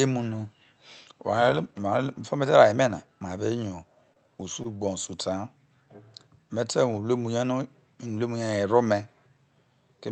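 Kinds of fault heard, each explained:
Short concealed packet loss: Twice, about 20 ms of the speech failed to reach the decoder in time, and the receiver covered each gap by extending the preceding sound before fading back into the real signal. Around 4.13 s and again near 4.63 s this comes across as a brief smear or wobble. The first repair stretches the sound slightly, adding a small lag, and both are heard through the call path's 8 kHz band limit.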